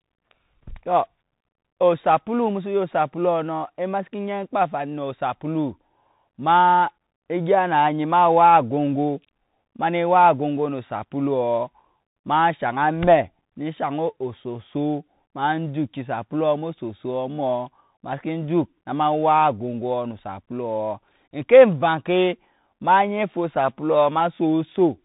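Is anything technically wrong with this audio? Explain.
Yes. The whole clip carries the sound of a Bluetooth CVSD headset codec. CVSD tracks the waveform one bit at a time, just nudging up or down with an adapting step, which fits a 64 kbit/s stream. Nothing gets through above about 3.8 kHz, so the speech sounds boxed-in and telephone-like. The damage is plainly audible: loud, bright moments outrun the step size and distort, s sounds come out scratchy, and a grainy hiss sits under everything.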